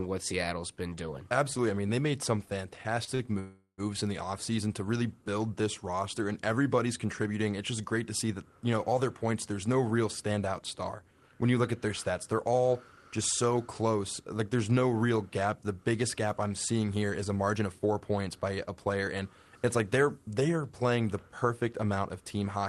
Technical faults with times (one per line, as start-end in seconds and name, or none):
3.04-3.22 short stall from a late packet
3.39-3.81 call audio freeze
16.96-18.31 jitter buffer speed-up
22.20-22.57 jitter buffer speed-up